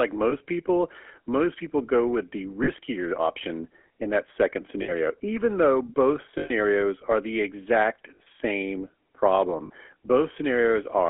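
Throughout, the speech carries the gritty, buzzy roughness of the GSM full-rate codec, which rebuilds the voice from a vocal-tract model driven by coarse pulse excitation; on a spectrogram nothing shows above about 3.4 kHz and harmonics look smeared and grainy.

Lost GSM frames interrupt it at 0.30–0.33 s, 2.64–2.69 s (between "people go with the" and "option in that second"), 4.82–4.92 s, 6.38–6.51 s (after "even though both", before "are the exact same"), 8.16–8.21 s (after "are the exact") and 9.66–9.71 s. Each gap is filled by repeating the last good frame, heard as a brief metallic ring. The waveform shows a repetitive stretch, and the spectrogram shows frozen horizontal bands. The longest is about 120 ms at 6.38 s.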